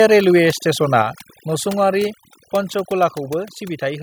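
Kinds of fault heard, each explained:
Overdone noise removal: A noise suppressor set far too aggressively works through the whole clip, cutting individual frequency bands down or out whenever they sit close to its idea of the noise floor. Quieter parts of the speech get removed along with the noise, while the background drops and breaks up into twinkling, warbling specks. Those isolated tonal specks set it apart from a simple gate, which mutes everything at once.
Microphone volume stepped down: At 1.02 s the level of both voice and background falls abruptly by about 4 dB and stays lower afterwards. This is most likely the call software judging the microphone too hot and lowering the device's input volume in a single step. Because the whole signal, noise included, shifts together in one clean drop, it differs from a compressor or automatic gain control, which would ride the level gradually and recover.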